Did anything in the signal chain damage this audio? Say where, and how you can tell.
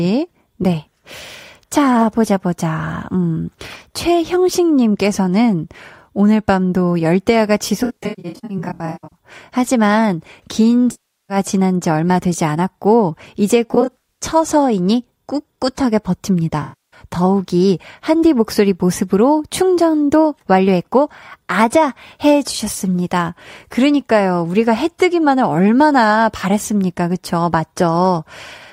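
Yes, at the codec and network stage: AAC frame loss with concealment damages the speech in four places. From 7.83 to 9.17 s, about 0.8 s of audio is missing across 1.28 s, with the longest gap roughly 150 ms. Further losses run 10.91 to 11.37 s, 13.70 to 14.23 s (scattered, longest about 70 ms) and 16.62 to 17.00 s. Each gap is filled in because the decoder rebuilds the missing frames from the last good spectrum.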